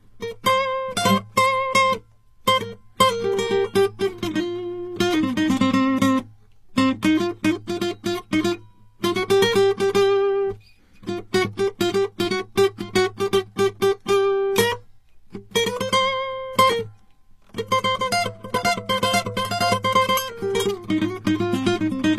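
Transcoding between lossy codecs runs throughout the music. Nothing sounds above about 14.9 kHz, and smeared, swirly highs sit alongside coarser grainy artefacts. This likely comes from a low-bitrate HE-AAC encode re-encoded to MP3 near 64 kbit/s, each stage compounding the other's damage.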